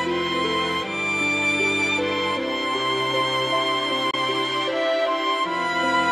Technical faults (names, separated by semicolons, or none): Bluetooth dropout